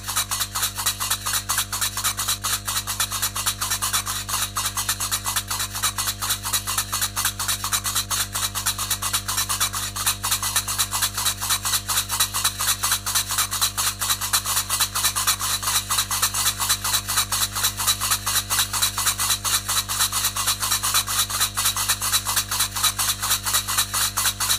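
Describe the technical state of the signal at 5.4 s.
Mains hum is present at 5.4 s, as it is across the whole clip. A ground loop or a transformer near the signal path is letting the 50 Hz power line leak into the audio. It is heard as a steady, low drone at 50 Hz with a few low harmonics above it. It sits at roughly 15 dB below the sound itself.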